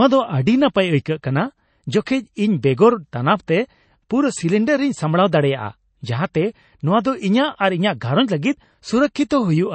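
From start to finish the speech has a hard ceiling at about 8.3 kHz, with nothing above it, and a watery, swirling texture on sustained sounds. The likely cause is MP3 compression at a bitrate starved enough that the encoder drops the treble outright and zeroes weaker frequency lines, which flicker in and out between frames. The damage is plainly audible: s sounds turn chirpy and metallic, onsets smear, and the level of loss fits a rate near 32 kbps.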